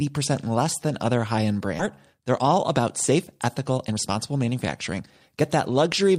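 At 1.8 s the speech lurches forward with no gap at all: about a second of audio is simply missing, and the sounds on either side of the cut butt straight against each other. This is a skip ahead. The receiver already had later audio queued, so a whole stretch was dropped, either lost in transit or discarded by an overflowing jitter buffer. Playback jumped to the waiting audio without any fill.

From 2.13 s to 6.18 s the speech sounds rushed, running at about 111% of normal speed while the pitch stays the same. This is a jitter buffer speed-up. The buffer was holding more audio than its target, so the receiver trimmed many short slices, each one or a few pitch periods long, in quick succession. Altogether they came to roughly 0.4 s of material, which brought the delay back down.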